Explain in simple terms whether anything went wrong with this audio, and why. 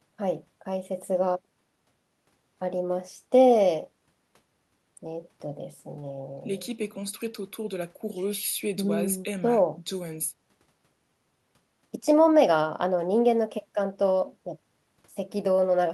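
Nothing went wrong with this speech recording that a listener would notice. At no point does the sound stop, jump or change unexpectedly.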